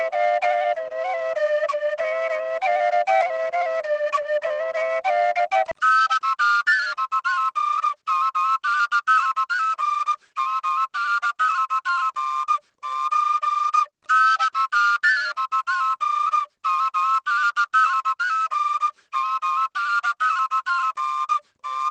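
At 5.71 to 5.73 s comes a skip ahead: with later audio already queued, about a second of sound was discarded and playback jumped forward with no filler. On a waveform the two sides butt together; a spectrogram shows an abrupt vertical seam.

From 5.84 to 10.79 s a jitter buffer speed-up follows, as the receiver works off the excess delay by trimming pitch-period-sized pieces, roughly half a second in total. The sound runs at 111% speed with unchanged pitch and feels hurried; harmonics stay level while events crowd closer together.

Across the clip, the call codec's content stops near 12 kHz, consistent with Opus at a modest bitrate.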